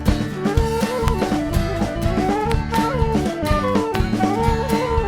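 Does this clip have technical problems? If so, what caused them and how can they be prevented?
Yes: loud pops, sharp clicks about 15 to 20 dB above the sound, at 1.08 to 1.10 s, as a double pop at 2.52 to 2.76 s, and at 3.95 to 3.97 s, likely from electrical transients such as plugging, switching or static. Securing connections and avoiding switching during recording prevents them.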